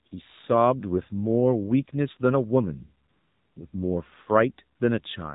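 From start to finish the speech carries AMR narrowband mobile codec damage, and it is plainly audible. Nothing above 4 kHz survives, so the sound is muffled like a phone line. A vocal-tract model driven by only a few pulses per subframe rebuilds the sound, which gives it a buzzy, synthetic edge that fits a low mode of around 7.4 kbps. Plain low-pass filtering also removes the top end, but it would not add this coded buzz.

AMR comfort noise appears three times. From 0.08 to 0.12 s, for 40 ms, the phone judged the talker silent and stopped sending speech frames. The receiver filled the gap with smooth synthetic noise built from a rough level-and-spectrum sketch. It happens again from 3.10 to 3.56 s, for 460 ms, and briefly from 4.78 to 4.80 s, for 20 ms. A dropout would leave dead silence or a click. Here the real background is swapped for an even hiss that switches in and out.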